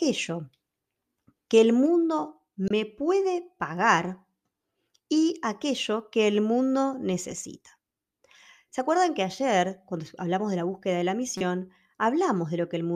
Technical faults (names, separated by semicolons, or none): corrupt frame decoded